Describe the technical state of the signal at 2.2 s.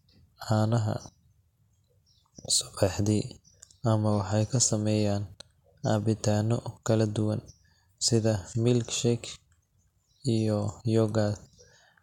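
At 2.2 s the speech signal is intact, with no audible technical fault at that moment.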